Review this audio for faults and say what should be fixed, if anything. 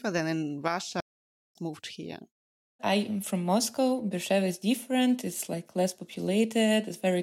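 There's a playback stall in this speech from 1.00 to 1.55 s, right after "than in": the audio just drops to silence for about 0.55 s and then resumes with "moved here." The gap sounds like the player ran dry or its thread got held up, most likely a buffer underrun, so output simply stopped until data arrived again. To prevent it, give the playback buffer more headroom and keep blocking work off the audio thread.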